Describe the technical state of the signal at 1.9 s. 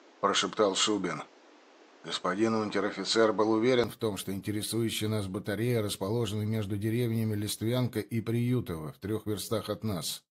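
From 0.0 to 3.84 s the sound is dull, cut off above 8.2 kHz, with shifted level and added background noise. The likely cause is an input switched to a poorer device.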